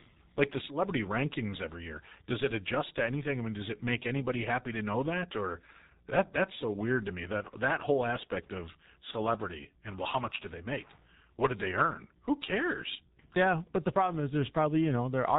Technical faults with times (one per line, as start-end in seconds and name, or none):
0.00-15.38 G.723.1 codec